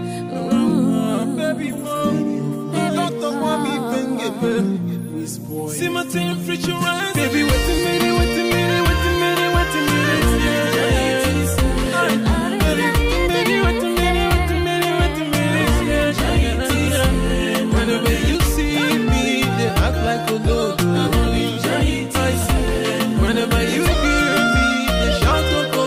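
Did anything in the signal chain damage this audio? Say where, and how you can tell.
No, nothing in the signal chain stood out as damaging this audio when I listened to it.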